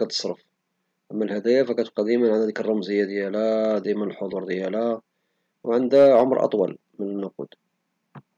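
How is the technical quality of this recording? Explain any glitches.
There is one glitch: hard clipping from 5.95 to 6.44 s. For about half a second the speech drives roughly 3 dB past what a stage in the chain can pass, so the peaks are sliced flat instead of rounding off. Those square tops add harmonics high above the voice, heard as a gritty crackle riding the loud syllables. A limiter or soft clipper would sound duller and smoother. The abrupt, bright edge that starts and stops with the peaks marks it as hard clipping.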